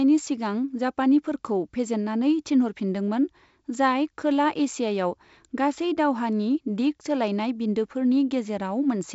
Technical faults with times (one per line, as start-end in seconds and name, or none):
none